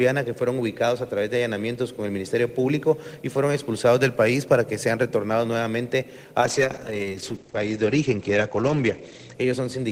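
At 6.41 s, a call bitrate drop starves the encoder, fitting a fall from 32 to 12 kbps. Content above 8 kHz vanishes, leaving rough, muffled sound thereafter.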